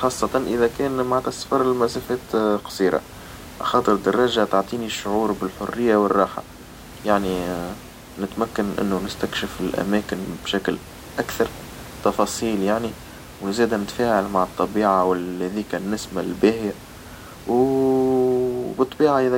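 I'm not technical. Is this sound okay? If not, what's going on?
Yes, nothing is wrong here.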